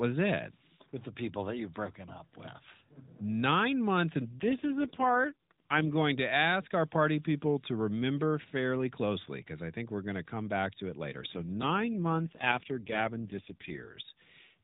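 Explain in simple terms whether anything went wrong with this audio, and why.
The speech turns rough and synthetic from 4.33 to 5.90 s, just before "going to ask our," and again from 11.32 to 13.99 s, after "back to it later." These are AMR rate drops: a weak mobile link forced the phone codec onto far fewer bits.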